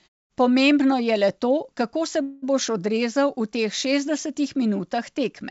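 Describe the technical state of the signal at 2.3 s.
At 2.3 s the speech sits inside a call audio freeze running from 2.22 to 2.44 s, likely caused by packets stalling in transit until the jitter buffer ran dry. For about 200 ms the receiver stretched the last sound into a decaying buzz or hiss rather than true silence, then carried on exactly where it stopped. Nothing is lost, but everything after 2.44 s now arrives roughly 200 ms later.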